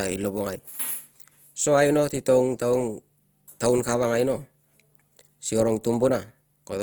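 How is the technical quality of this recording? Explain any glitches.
The quality is held back by one plainly audible fault that runs through the whole clip.

Opus compression, throughout: the speech has a rough, grainy texture, most likely from Opus in its music (CELT) mode at a rate that fits about 24 kbps. With too few bits, the encoder fills bands with folded or noise-like content. Bandwidth stays full, reaching about 20.2 kHz, but tonal parts turn noisy.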